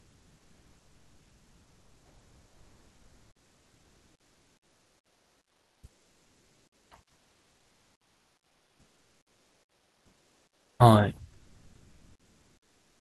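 From 0.0 to 6.91 s, 7.13 to 10.79 s and 11.33 s to the end, the background turns into a steady, featureless hiss: about 5 dB quieter in the first stretch, about 3 dB in the second, and at an unchanged level in the last. This is comfort noise in place of the background, likely from discontinuous transmission, where the sender goes quiet between speech and the receiver fills the gaps with synthetic noise.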